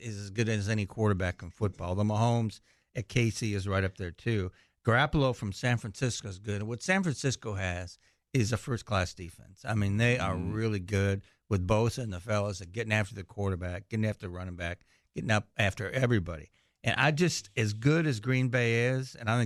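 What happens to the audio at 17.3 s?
Nothing goes wrong at 17.3 s; the audio runs through that point intact, with no dropout, click, distortion or other audible fault.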